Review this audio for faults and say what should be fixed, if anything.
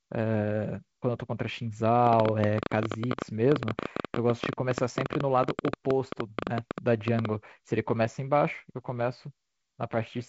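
From 2.07 to 7.26 s a train of clicks ticks and pops over the speech and its pauses, about 12 per second at an uneven pace, roughly 70 in all, standing well above the speech. The likely cause is interference from nearby equipment or a faulty connection or power supply injecting repeated pulses. To prevent it, route cables and the interface away from electrical equipment and check the interface's power, connections and drivers.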